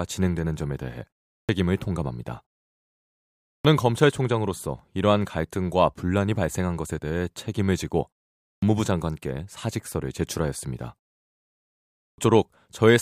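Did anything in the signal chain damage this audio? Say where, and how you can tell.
Yes, a clipped start after a pause at playback: speech resumes abruptly at 1.39, 3.55, 8.53 and 12.09 s, each losing 90 to 100 ms while the sleeping output device wakes.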